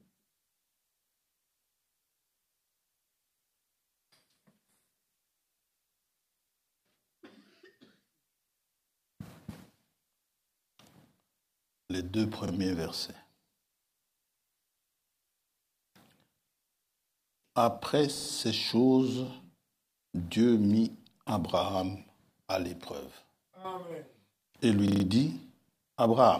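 Repeated buffers occur at 9.28, 12.48, 18.16 and 24.88 s. New audio arrived late, so the last block replayed. Each repeat lasts 40 ms, which fits a 40 ms buffer. The first two sound once extra. The later two stutter three and four times, with hard joins.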